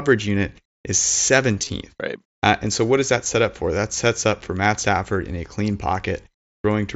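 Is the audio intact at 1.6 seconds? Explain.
No. Just after "unit is", from 1.54 to 1.69 s, the sound turns buzzy and repetitive, with a slight warble as it settles back. This is concealed Bluetooth headset packet loss. Several short dropouts, totalling about 67.5 ms scattered across 150 ms with none longer than 22.5 ms, were filled by repeating the best-matching recent stretch of waveform. Because each gap is brief, the patching is mostly disguised rather than heard as silence.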